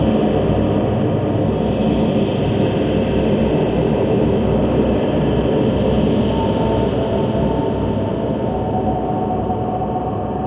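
No technical faults can be heard anywhere in these sounds; the signal stays intact and continuous throughout.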